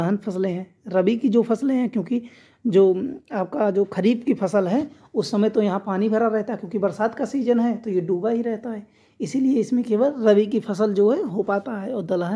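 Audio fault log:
No faults can be heard anywhere in this clip. Nothing in the audio calls for a log entry.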